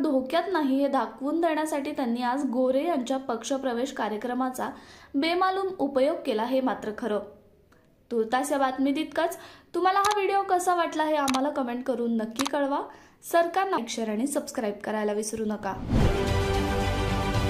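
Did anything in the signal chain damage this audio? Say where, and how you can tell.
Yes. The damage happened at playback, and it is a CD skip. At 13.78 s a tick marks a very brief mute, only a few milliseconds long. The sound then carries on from a different point. It does not continue where it left off. That is the sign of the laser losing its track. A knock or a disc flaw pushed it onto another turn of the spiral. So the audio jumps by a multiple of one disc revolution.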